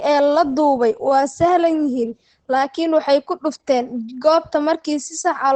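From start to finish the speech sounds muffled and hoarse, with nothing at all above about 8.8 kHz, so the air and crispness of consonants are gone. The damage is heavy and constant. The likely cause is Opus compression pushed into its SILK speech mode at wideband bandwidth, which fits a bitrate around 12 kbps, where the encoder discards high frequencies and fine detail to save bits.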